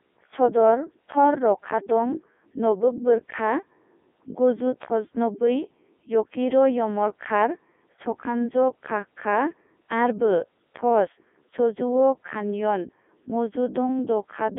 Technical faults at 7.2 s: Codec 2 vocoder

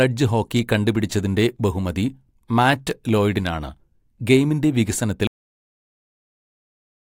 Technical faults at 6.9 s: cut-off end

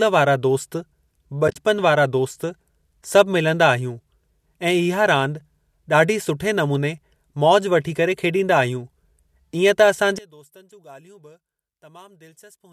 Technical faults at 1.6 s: AAC frame loss with muting

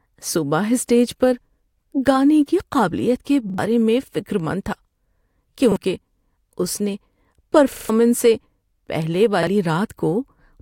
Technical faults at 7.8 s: repeated buffer

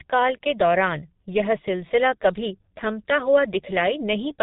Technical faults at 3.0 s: G.723.1 codec

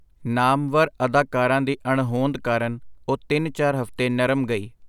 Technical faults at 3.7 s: none

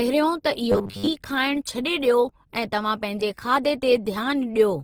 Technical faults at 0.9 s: Opus compression; robotic sound from repeated short buffers

